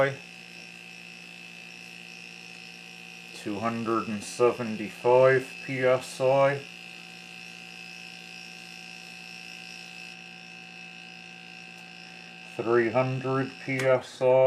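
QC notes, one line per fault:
0.00–10.13 s, pre-emphasis left on: the treble boost applied before recording was never undone, so highs sit about 8 dB hot at 10 kHz relative to 1 kHz. That tilt fits the CD 50/15 µs curve and makes the sound thin, bright and sibilant.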